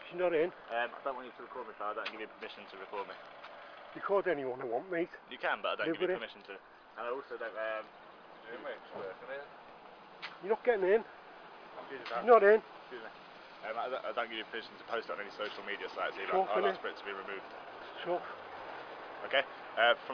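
No technical faults can be heard anywhere in the audio. Nothing in it calls for comment at any point.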